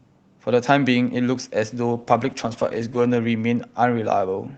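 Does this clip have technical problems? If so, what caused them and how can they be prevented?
Yes. From 1.95 to 3.73 s a call bitrate drop makes the sound rough and muffled, which fits Opus stepping down from 32 to about 11 kbps. A spectrogram shows energy below 8 kHz thinning and smearing, worst for about 1.24 s. Steadier network bandwidth and a higher minimum encoder bitrate would prevent it.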